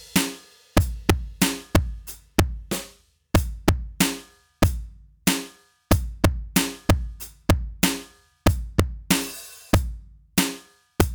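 Integer overflow runs throughout the music: with the signal pushed about 5 dB past the integer limit, the loudest peaks, around half a percent of samples, wrap to the opposite extreme instead of being held, producing violent, sharp cracks on loud moments.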